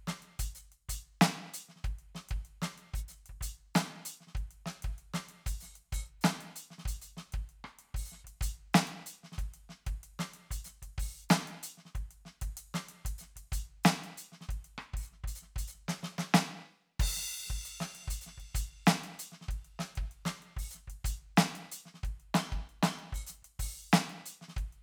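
No technical faults are audible.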